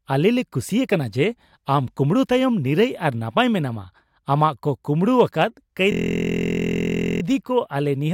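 Speech, interrupted by a system hang loop from 5.92 to 7.22 s: a 23.22 ms slice, consistent with a 1024-sample buffer, repeats dozens of times, buzzing at 43.1 Hz. The waveform shows identical repeating blocks, and the spectrogram shows evenly spaced horizontal harmonic lines.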